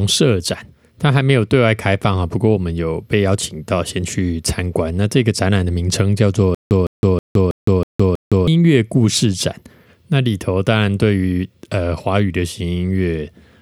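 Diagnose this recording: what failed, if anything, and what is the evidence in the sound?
Playback stage, stutter with silent gaps, 6.55 to 8.48 s: a 159 ms fragment replays six times with 163 ms of silence between, likely a stalled stream retrying.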